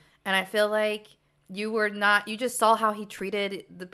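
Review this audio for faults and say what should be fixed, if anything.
A corrupt frame decoded at 3.17 to 3.20 s, just after "you just saw how", gives a short blip of misplaced energy. Damaged bits in about one compressed frame were decoded anyway. Wrong gains or codes briefly put sound at wrong frequencies, peaking near -30 dBFS. To prevent it, protect the stream with error checking and have the decoder conceal or drop frames that fail it.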